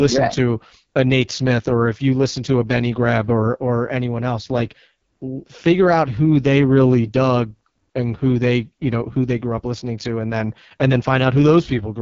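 Speech sounds rough and raspy from start to finish, with a heavily damaged, buzzy texture and no content above about 7.4 kHz. This is the AMR wideband (HD Voice) codec at its lowest rate, which fits the 6.6 kbit/s mode. A pulse-driven model of the vocal tract rebuilds the speech band up to 6.4 kHz from very few bits, while the strip above that is filled with shaped noise rather than real detail.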